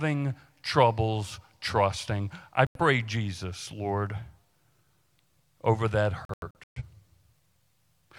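A digital broadcast dropout silences the speech from 2.67 to 2.80 s after "troubles trusting I". It returns at 6.25 to 6.82 s after "over that" as several short holes, the longest about 0.13 s. The receiver muted failed frames, so the sound disappears outright and resumes later instead of stuttering or repeating.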